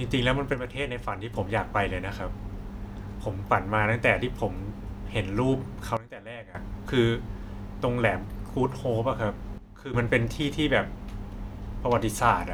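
Sudden gain jumps occur at 0.53 to 1.34 s, 5.97 to 6.55 s and 9.58 to 9.94 s, where the speech and its background noise drop together by about 6 dB, about 17 dB and about 12 dB, then snap back. Each change lands between one sample and the next with no ramp, likely a digital gain setting applied instantly, so the level steps down abruptly rather than fading, most starkly in the deep middle dip.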